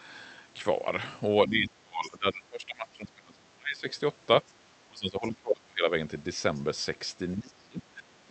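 From 1.46 to 3.87 s the speech sags and breaks up, dropping by roughly 30 dB at its deepest, which is speech suppressed in double talk. Both ends were most likely talking at once, and the echo canceller, unable to separate the local talker from loudspeaker echo, turned everything down. Inside that stretch, from 2.03 to 2.10 s, there's a faint scrap of the other side's voice leaking through, sitting around 20 dB below the speech, probably residual echo the canceller failed to remove.

The same suppression comes back with a brief, shallow dip of around 10 dB at 4.63 to 4.67 s. A fuller one follows from 4.87 to 5.87 s, cutting the level by something like 25 dB, and each is likely the canceller reacting to overlapping talk again. At 6.55 to 6.61 s another tiny leak of the far-end voice pokes through, very quiet at roughly 35 dB under the speech. Then from 7.34 s to the end at 8.30 s the speech is pulled down once more, by about 25 dB, plausibly the same double-talk clamping.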